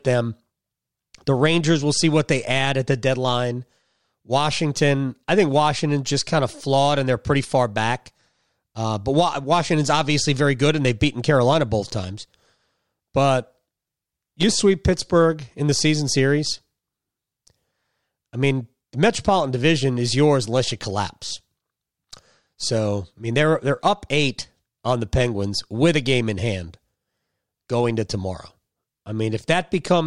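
Nothing stands out here: the speech runs along without any technical fault worth pointing to.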